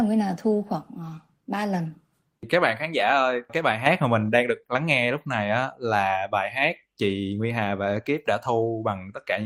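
Nothing stands out as a technical fault anywhere in this bit of speech, so there's really nothing to flag here.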